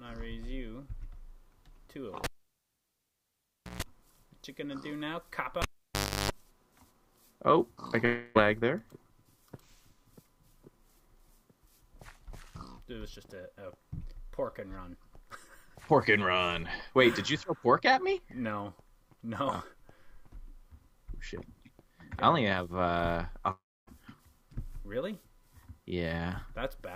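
A pop at 2.24 s drops the sound to near silence for about 1.5 s, then a brief 60 Hz hum of roughly 0.14 s and a second pop bring it back at 3.83 s. The same pattern recurs from 5.62 to 6.31 s, with about 0.64 s of quiet and a longer 50 Hz buzz of about 0.35 s. This is a cable pulled and plugged in: the live lead is yanked out, and mains hum leaks in while only the tip touches during reinsertion. At 8.05 s the last sound smears into a fading buzz for about 0.3 s before the audio resumes at 8.37 s. At 23.51 s a similar fading fill runs out into silence, and sound returns at 23.89 s after roughly 0.36 s is gone. Both gaps are likely a long network dropout, where the receiver papers over missing packets with decaying noise and the lost audio never plays.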